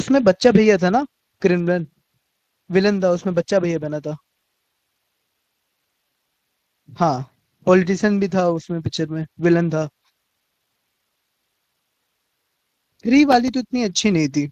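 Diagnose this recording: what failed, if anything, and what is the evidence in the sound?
The codec stage is at fault throughout the speech. The sound has the Speex codec's signature, a hoarse, grainy coarseness laid over the voice that stays plainly audible from start to finish, with nothing above 15.2 kHz. Speex is a CELP coder: it models the vocal tract with a filter and spends its limited bits on the excitation signal driving it. Here the excitation is too coarsely coded, which leaves that rough texture. The degree of damage points to a bitrate somewhere around 22 kbps.

The analogue wiring stage fails briefly from 13.32 to 13.49 s. Over that span of about 170 ms there is an irregular burst of scratchy crackle, the classic loose connector crackle. A worn or dirty contact is making and breaking many times in quick succession, chopping the signal into fragments. Any DC present on the line turns each break into a small pop, producing the ragged, scraping texture rather than a single clean click.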